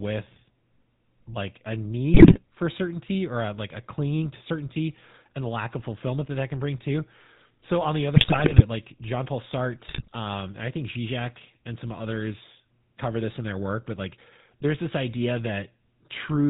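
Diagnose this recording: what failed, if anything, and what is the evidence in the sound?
The whole recording went through the GSM full-rate codec. Nothing above 4 kHz survives, and the speech has that buzzy, gravelly edge you get when a vocal-tract model is driven by thinned-out, regularly spaced excitation pulses, which fits the old 13 kbps coder.

On top of that there are GSM bit errors from the radio link, at 2.14 to 2.39 s, 8.16 to 8.62 s and 9.88 to 10.18 s. Corrupted filter, pitch and gain parameters make the decoder squawk, pop and gargle for several frames at a time, worst in the first burst.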